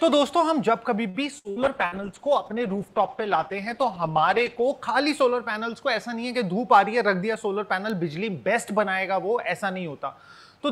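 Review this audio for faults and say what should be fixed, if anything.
From 1.09 to 1.95 s there's repeated packet loss, and it gives that robotic, choppy quality. Four short holes open up, the longest about 64 ms and about 180 ms in total. Each one is patched by stretching the last bit of sound, so roughly a quarter of that stretch is concealment rather than real audio, and you hear choppy sound with chunks missing. A deeper jitter buffer and forward error correction would absorb most of these losses.

Overlapping that, a call bitrate drop runs from 1.63 to 4.74 s. The sound turns coarse and watery with the top end dulled, which fits the encoder being squeezed from something like 128 kbps down to around 13 kbps. It sits at that floor for about 3 s before things recover. At that rate Opus throws away detail and bandwidth, which is exactly the muffled roughness you hear here. A less aggressive bandwidth estimator, or a higher minimum bitrate, would keep it from collapsing this far.

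Two bit error spikes show up as lone sharp ticks, one at 5.20 s and another at 7.90 s. The first looks like a single corrupted sample, the second like two in a row. In each case a flipped bit throws the sample value off by a power of two and then it snaps straight back. That gives a broadband click that has nothing to do with the underlying sound. Checksums or error correction on the digital link and in memory would catch these.

Between 6.97 and 7.47 s there's a jitter buffer speed-up. The audio runs about 9% fast with the pitch unchanged, so it sounds rushed for half a second. The buffer had filled beyond its target, likely after a burst of delayed packets landed together. To cut that back down it trimmed out tiny pitch-period-sized slices, about 50 ms in all. Smoother buffer adaptation, spreading the catch-up over a longer window, would make this far less noticeable.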